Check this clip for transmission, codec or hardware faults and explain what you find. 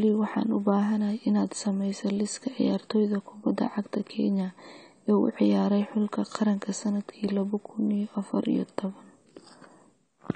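There's one fault, and it runs through the whole speech clip: AAC compression. Nothing comes through above about 9 kHz, and the codec damage is plainly audible. That's likely AAC-LC squeezed to around 32 kbps: it drops the top band and starves the rest of bits, so the voice sounds dull and smeared, with a fizzy, warbly edge on sibilants.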